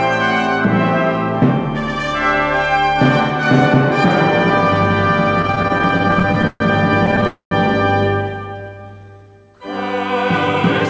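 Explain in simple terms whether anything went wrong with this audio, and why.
Yes, a few things went wrong, all in the second half.

From 5.42 to 6.62 s the sound has repeated stalls (stutter). It catches and holds about two dozen times in just over a second, the longest hold about 0.13 s. Packets were reaching the receiver late, so its buffer kept running dry. Each time, it stretched the last bit of sound until more arrived. Nothing is lost, but the passage drags and judders. A shorter burst of the same stutter follows from 7.06 to 7.27 s, with five tiny catches.

Right after, from 7.27 to 7.53 s, comes a call audio freeze. The sound hangs as a fading buzz or hiss and then drops out for about 0.13 s of silence. It then picks up exactly where it left off, about a quarter of a second late. The likely cause is a longer hold-up of packets on the way, which emptied the buffer completely.

From 8.58 to 9.24 s there is a jitter buffer slow-down. 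The sound plays at about 83% of normal speed, but the pitch stays the same. The receiver was rebuilding its reserve by repeating tiny slices of the sound, adding about 0.12 s. This makes sounds seem drawn out.

Throughout, the call codec also cuts off everything above 8 kHz, so the top end sounds a little dull.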